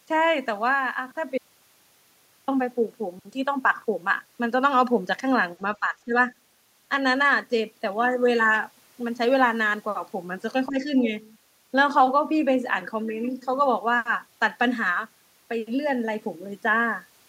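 At 1.38 s the input was likely lost while the recorder kept writing silence, producing an audio dropout to silence: the speech cuts off abruptly and about 1.1 s of dead silence, with no room tone, passes before it resumes at 2.48 s.

From 5.80 to 6.14 s the echo canceller likely mistook overlapping talk for echo, causing speech suppressed in double talk. The voice dips by roughly 15 dB in places.

Between 10.67 and 10.88 s the same confusion likely recurs, with a shallower dip of roughly 10 dB as the talker's level sags momentarily.

From 11.19 to 11.32 s the canceller likely left residual loudspeaker signal in the microphone, so the other side's voice leaks through as a faint scrap, about 30 dB below the main speech.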